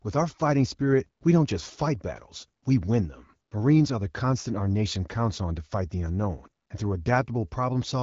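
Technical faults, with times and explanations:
Nothing stood out on listening to this speech.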